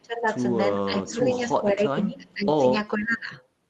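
Speech that passed through a call codec, its spectrum stopping near 12 kHz, shows speech suppressed in double talk three times: 0.00–0.28 s, 0.89–2.64 s and 2.97–3.34 s. The voice sags by up to about 20 dB in the first and last spans and about 15 dB in the middle one, where roughly a second in total is pulled down in patches. On a waveform the envelope pinches inward in those stretches, and a spectrogram shows the harmonics fading and the upper bands thinning or breaking into gaps. The likely cause is an echo canceller that could not tell this talker from loudspeaker echo while both sides spoke, so it attenuated everything. Inside the middle span, at 1.34–1.39 s, there is an echo leak: a faint, brief copy of the voice about 25 dB below the speech, trailing the original by 470 ms. It shows as a weak repeat of the earlier harmonic pattern shifted by that delay, with barely any bump on the waveform. 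Its likely source is residual loudspeaker pickup that the canceller failed to remove.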